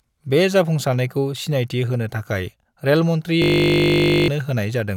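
At 3.42 s a system hang loop takes over and runs until 4.28 s. The playback side froze while the sound hardware kept replaying a ring buffer of about 20 ms, so one tiny slice repeats at 50 Hz and is heard as a steady, flat buzz. Roughly a second of audio is lost. On a waveform, an identical 20 ms cycle tiles the whole span. A spectrogram shows a frozen comb of harmonics spaced 50 Hz apart.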